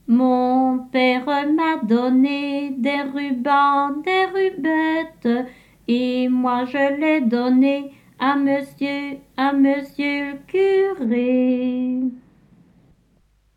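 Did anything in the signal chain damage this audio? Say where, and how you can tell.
Yes. From 11.05 s to the end at 13.57 s the sound turns dull and muffled, the mark of de-emphasis applied wrongly at a playback or processing stage. A treble cut meant to undo pre-emphasis landed on audio that never had any, or was applied a second time, so the response slides down gradually toward the top, about 14 dB lower at 10 kHz than at 1 kHz. Because the slope is smooth rather than a sharp ceiling, it differs from a low-pass filter or a codec's bandwidth cut-off.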